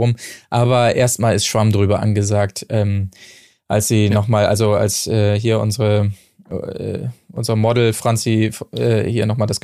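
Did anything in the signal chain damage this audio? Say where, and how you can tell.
No, nothing along the chain from capture to playback has left an audible mark on this speech.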